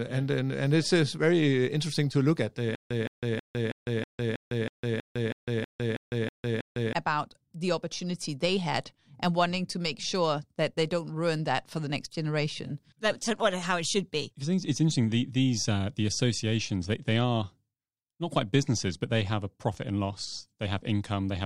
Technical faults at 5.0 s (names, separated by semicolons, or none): stutter with silent gaps